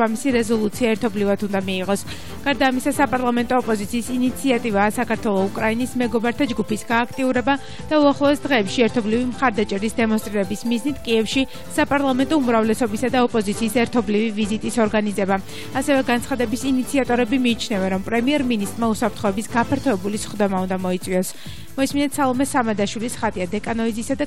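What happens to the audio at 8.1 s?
At 8.1 s the sound sits inside a Bluetooth SBC bit pool drop running from 7.27 to 10.18 s. The link starved the encoder, which fits a fall from bit pool 31 to about 12 (roughly 88 kbps), so upper sub-bands lose their bits. The treble dulls and gritty noise appears. A spectrogram shows the top band emptied and grainy smearing below.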